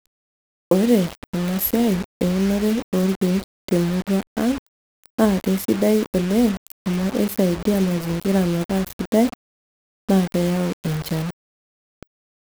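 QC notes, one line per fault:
Throughout, low bit depth without dither: the speech carries a grainy, rasping distortion that shifts with every syllable and swells or thins as the level changes, with quantisation error sitting only about 15 dB below the signal. That points to the audio likely having been reduced to around 5 bits by plain rounding with no dither, so the error tracks the waveform itself, quiet passages turn gritty, and the softest moments sputter or fall to silence.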